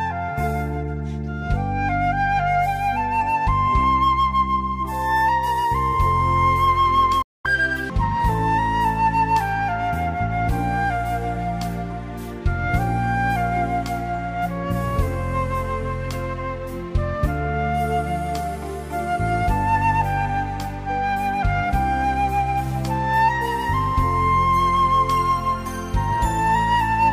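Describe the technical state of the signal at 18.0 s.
The signal at 18.0 s is intact, with no dropout, distortion, clipping or other technical fault audible at that point.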